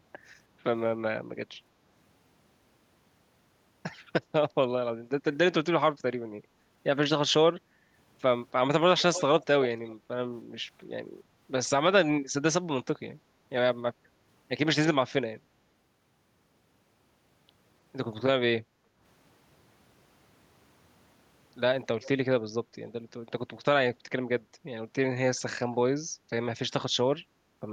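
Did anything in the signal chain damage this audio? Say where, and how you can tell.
Yes. Call processing is the culprit. Repeats of the speech appear at 8.97–9.23, 9.62–9.67, 9.85–9.94 and 22.02–22.09 s. They trail the original by a steady 0.30–0.32 s and sit roughly 10 to 30 dB lower. This is likely echo leak past a far-end echo canceller, and the fixed lag rules out room reverberation.

The same stage also causes background gated by the echo canceller. The room background dips by about 6 to 9 dB at 9.97–10.08, 18.64–19.00 and 26.13–26.25 s, each time for a fraction of a second, then recovers. The canceller is turning the microphone down, so the level sinks but never falls to true silence, which separates it from a packet dropout.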